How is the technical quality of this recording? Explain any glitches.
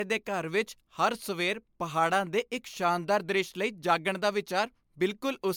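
The recording is degraded throughout by generation loss. The speech sounds swirly, smeared and hollow, with blurred consonant attacks. The likely cause is repeated lossy encoding, which fits about four MP3 passes near 128 kbit/s, each re-quantising on a shifted frame grid so noise and spectral holes pile up. Unlike a single low-bitrate encode, the top end still reaches about 20.1 kHz, but the texture is messier than that bandwidth would suggest.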